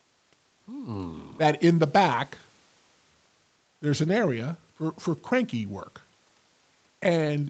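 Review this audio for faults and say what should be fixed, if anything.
Nothing here needs fixing, since the speech just sounds like an ordinary call recording, with the highs stopping at 8 kHz, which fits an Opus call link running at around 24 kbps.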